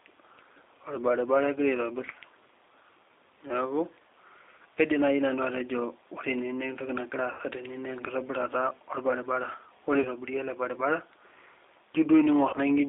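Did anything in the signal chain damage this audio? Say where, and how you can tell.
Yes. The codec stage is at fault. The whole clip went through the G.729 codec at 8 kbit/s, and the band sits at roughly 300 Hz to 3.7 kHz. Speech is rebuilt from a filter, a pitch predictor and a few pulses per frame, so it sounds plainly rough and synthetic.

The network stage dropped packets, and the decoder covered the gaps with VoIP packet loss concealment. It extended its last pitch and filter into a fading buzz or coloured noise at 4.75 s before "naaji nanu", 7.31–7.41 s before "tene naa", 10.01–10.09 s and 12.49–12.57 s. The gaps point to one, four, two and two lost 20 ms packets.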